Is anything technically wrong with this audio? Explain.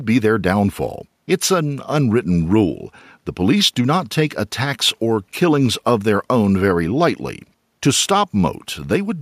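No, nothing technically wrong can be heard in this speech recording.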